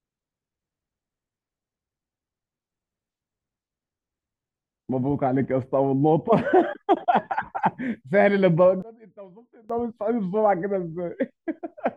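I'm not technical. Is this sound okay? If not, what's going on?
No. From about 8.82 to 9.70 seconds the voice suddenly drops away to a faint trace, then comes back to normal. That's the classic sound of one channel inverted: one side of the stereo pair is likely flipped upside down, so when both sides get combined into a single channel, the centred voice cancels itself out. What's left is just the small difference between the two sides, which is why it sounds so weak.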